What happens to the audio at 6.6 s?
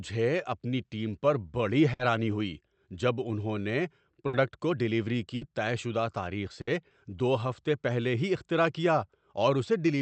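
A burst of packet loss runs from 6.61 to 6.70 s, right after "طے شدہ تاریخ". The receiver covers the gap by stretching the last sound for about 60 ms while fading it, then resumes at "دو ہفتے پہلے ہی" with about 60 ms of speech gone.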